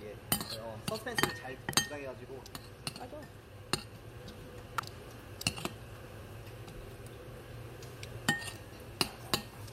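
A sharp snap lands at 1.73 s, and a louder one at 4.78 s. Both are electrical switching spikes, likely from a nearby switch arcing into the audio line.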